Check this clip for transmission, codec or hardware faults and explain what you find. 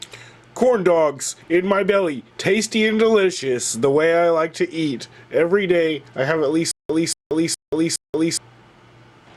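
There is one fault, a stutter with silent gaps, from 6.71 to 8.37 s. The player or stream has likely stalled, and at each retry it replayed the last fragment it held before running dry. The same 234 ms burst of sound repeats four times, each followed by about 181 ms of dead digital silence, so it returns at a steady 415 ms interval. Whatever should have played across that stretch is missing.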